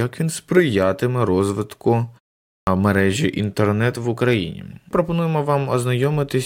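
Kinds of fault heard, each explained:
Clipped start after a pause: at 2.57 s, after about half a second of silence, the output path wakes late and swallows roughly 100 ms of the next onset.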